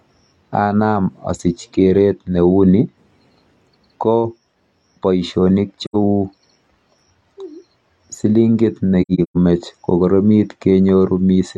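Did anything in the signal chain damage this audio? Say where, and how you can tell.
Yes. The damage is at the codec stage: AAC frame loss with muting, where frames never reached the decoder and it filled them with a zeroed spectrum. At 5.85 to 5.96 s the speech drops out for about 85 ms, which fits two lost frames. From 9.02 to 9.37 s, gaps totalling about 256 ms are scattered over roughly 340 ms, the longest around 150 ms. Overlapping transform windows make each hole fade out and back in.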